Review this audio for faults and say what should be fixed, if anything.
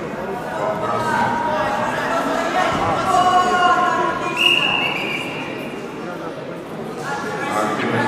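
A corrupt frame decoded appears near the end, from 7.80 to 7.83 s: a short glitch about the length of a single compressed frame, peaking around -10 dBFS. Damaged bits inside that frame gave the decoder wrong gains or misread spectral codes, so it rebuilt energy at frequencies the sound never had. Unlike a click, it is a brief burst rather than a single sharp tick. To prevent it, add error detection such as a frame checksum so damaged frames are concealed instead of decoded.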